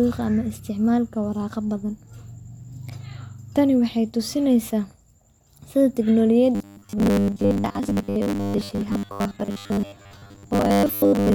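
A speech clip with robotic sound from repeated short buffers from 6.55 s to the end, a fixed 100 Hz buzz, likely from replaying a 10 ms buffer over most of the audio. Unlike ordinary stutter, the buzz stays rigid.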